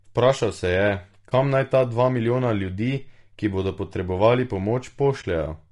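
Low-delay AAC compression runs through the whole speech clip and is plainly audible. The voice sounds rough and grainy, with noise filling the gaps between harmonics. This is likely AAC-ELD, whose short frames resolve pitch poorly, at a low bitrate around 32 kbps.

AAC frame loss with muting occurs at 1.29–1.32 s and again at 5.21–5.24 s. Each gap fits a single lost frame of about 20 ms whose spectrum was zeroed. The overlapping windows fade the sound out and back in, leaving a brief dip.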